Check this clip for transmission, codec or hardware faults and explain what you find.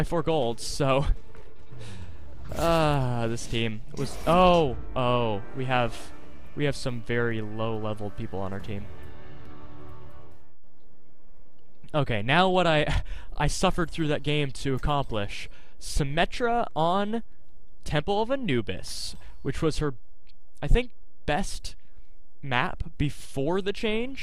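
One fault runs through the whole clip. DC offset, present from start to finish: the entire waveform sits displaced from zero by a constant level of about -30 dBFS. It isn't audible as a sound, but it eats into headroom and appears as steady energy at 0 Hz.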